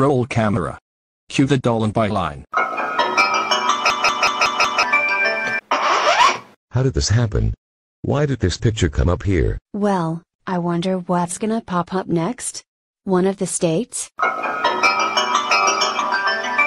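A system hang loop runs from 3.90 to 4.83 s: the driver stalled while the sound hardware kept replaying its ring buffer, so one 185.76 ms slice repeats five times at 5.38 Hz, a machine-gun stutter consistent with an 8192-sample buffer, with roughly a second of audio lost.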